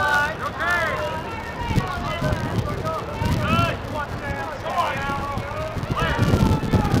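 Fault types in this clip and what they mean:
Filter restarted on every block: A filter loses its memory at each block boundary and restarts from silence. Each restart leaves a small transient. Here that gives a steady 200 Hz buzz throughout, pointing to blocks of 5 ms. The buzz rises and falls with the sound's level.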